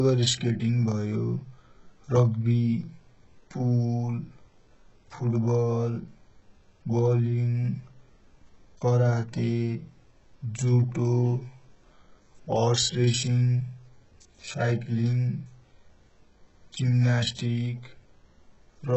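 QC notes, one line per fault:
Throughout: HE-AAC compression, likely. Treble is rebuilt from copied lower bands, so sibilants sound gritty and metallic. Nothing above 10.4 kHz. Heavy damage fits roughly 8 kbps.
17.35 to 17.39 s: pre-echo. Codec noise smears about 35 ms ahead of a sharp attack, adding brief hiss and softening its onset.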